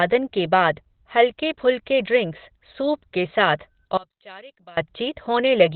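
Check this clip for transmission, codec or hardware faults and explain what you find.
Two faults show up here, one running the whole length and one brief dropout.

Throughout, the speech is boxed into a narrow band with nothing above 4.3 kHz, and it sounds muffled, hoarse and heavily damaged. That points to Opus compression, likely in its SILK speech mode at a low rate around 12 kbps, where the encoder drops the top of the spectrum to save bits.

From 3.97 to 4.77 s the level falls by about 25 dB and the voice nearly vanishes, leaving only a faint trace. That likely points to one channel inverted: with reversed polarity on one side, the centred speech cancels when the two channels are summed to mono.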